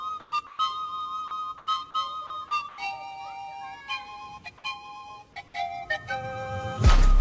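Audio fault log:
0.20–0.32 s, 0.47–0.59 s, 1.58–1.67 s, 2.69–2.78 s: comfort noise in place of the background. Pauses of 90 to 120 ms swap the real background for smoother synthetic noise, level unchanged or up to about 2 dB lower, likely from discontinuous transmission.
1.28–1.31 s, 2.27–2.30 s: sound dropped by the voice detector. Each time, 30 ms of sound gives way to steady comfort noise, likely because the sender's detector took it for background and stopped sending.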